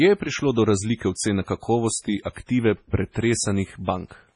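MP3 compression runs throughout: nothing above 10.4 kHz, with watery, swirling speech from heavy codec damage. This is likely a low-bitrate encoder, with the sound pointing to around 24 kbps. Pre-echo at 1.14 to 1.17 s, just after "je prišlo do razlike": a 35 ms hiss precedes the attack, because quantisation noise spread across the transform block fills the quiet moment before it.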